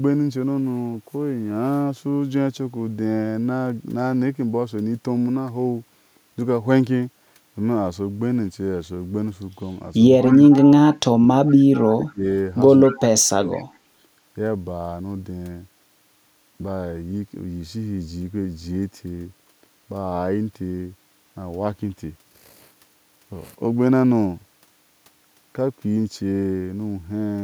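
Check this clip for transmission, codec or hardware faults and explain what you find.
Two related echo-control faults occur in this speech clip between 10.18 and 13.64 s.

Speech suppressed in double talk occurs at 10.18–10.24, 10.92–11.26, 11.89–12.25 and 12.91–13.62 s. The voice dips by up to about 30 dB, likely because the echo canceller mistook overlapping talk for echo. The waveform shows sudden envelope notches, and the spectrogram shows the energy thinning across the band.

Echo leak occurs at 10.19–10.95, 11.45–11.86, 12.83–12.99 and 13.54–13.64 s. A faint copy of the voice returns 194 ms late, about 20–35 dB down, likely residual loudspeaker pickup that the canceller missed. On a spectrogram it appears as a weak shifted duplicate of the harmonic pattern.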